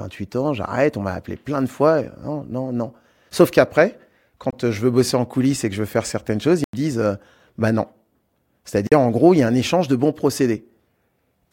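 Three abrupt holes break up the speech: at 4.51 to 4.53 s just before "je veux bosser en" (23 ms), at 6.64 to 6.73 s right after "veux faire certaines choses" (93 ms, an audible gap), and at 8.87 to 8.92 s before "en gros il y" (46 ms). Each is a block of digital silence, likely where the output buffer went unfilled and was sent as zeros. The lengths fit buffers of 1024, 4096 and 2048 samples.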